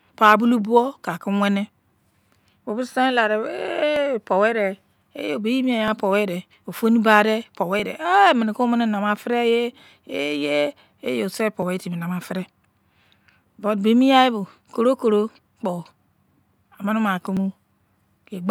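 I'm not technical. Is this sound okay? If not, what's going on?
No. Two pieces of equipment handling this speech were likely each keeping time on their own clocks, running apart by less than a tenth of a percent. That mismatch builds up until a small chunk of sound is dropped or repeated, which is called clock drift buffer slips. You hear it as a click roughly every 1.9 seconds, about ten in all, from 0.13 s to 17.37 s.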